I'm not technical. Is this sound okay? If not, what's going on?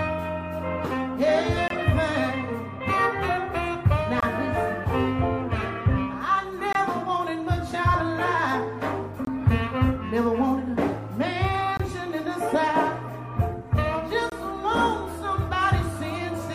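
No. The sound briefly drops out at 1.68, 4.20, 6.73, 9.25, 11.77 and 14.30 seconds, each hole about 23 ms long. This is a gap between chunks: the audio arrives in 2.5-second pieces, and a little silence is left at each join.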